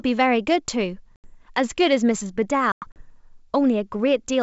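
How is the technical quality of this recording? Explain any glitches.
The recording has two dropouts, both from packet loss on an ADPCM call, carried over wideband G.722 coding that sounds like its full 64 kbit/s mode.

At 1.16 to 1.27 s, about 80 ms of audio goes missing, which points to roughly four packets. From 2.72 to 3.08 s, about 140 ms is lost in bursts spread across 240 ms, the longest run 100 ms, which suggests around seven packets. Lost packets become silence, leaving hard-edged holes, and the receiver's adaptive predictor and step size drift out of step with the sender's. Each time the speech comes back, it briefly returns with slight distortion before resettling.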